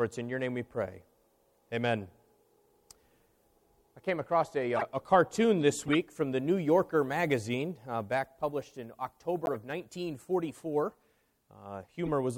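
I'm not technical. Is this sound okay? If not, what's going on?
No, there are five short glitches, at 4.76–4.83 s, 5.87–5.96 s, 7.60 s, 9.45–9.56 s and 12.06–12.09 s. Each is a corrupt frame decoded: damaged data played anyway, so you hear a brief chirp or burst of noise.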